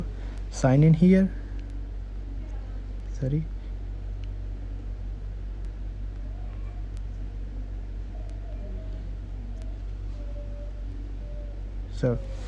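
Nothing in the signal points to a technical fault at any point in the audio.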